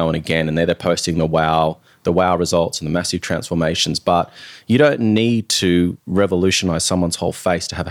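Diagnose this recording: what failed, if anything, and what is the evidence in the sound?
Nothing in this speech recording points to a failure at any stage, so there's really nothing to diagnose here.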